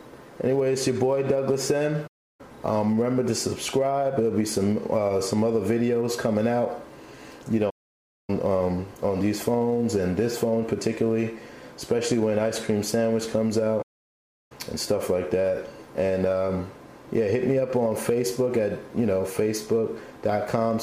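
The audio has three playback stalls. The sound cuts to silence mid-flow at 2.07 to 2.41 s, for about 0.32 s. It stops again at 7.69 to 8.30 s, for 0.58 s, and at 13.82 to 14.52 s, for 0.68 s. Each gap is longer than the one before. The likely cause is the player running short of data, or its playback thread being blocked, so output halts until it recovers.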